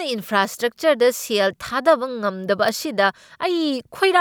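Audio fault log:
2.68 s electrical switching spike: a single sharp, fairly loud snap sits on top of the speech, likely from a nearby switch or static discharge arcing into the audio line.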